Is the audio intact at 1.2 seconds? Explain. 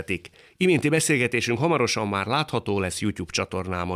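Yes, the speech at 1.2 seconds plays through intact, with no dropout, click, distortion or other fault audible at that moment.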